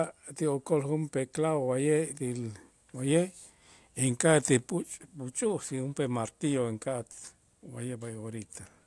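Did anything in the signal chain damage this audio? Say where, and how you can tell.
No, nothing in the chain has left an audible mark on this speech recording, and the signal holds steady level, continuity and timing at every stage from capture to playback.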